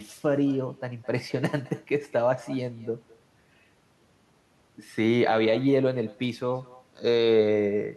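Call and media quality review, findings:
Echo with no canceller, throughout the speech. Every phrase is trailed by a faint, thin copy about a fifth of a second later, at about 23 dB below the talker. Far-end loudspeaker audio re-captured by its microphone and returned over the network, with no echo cancellation removing it.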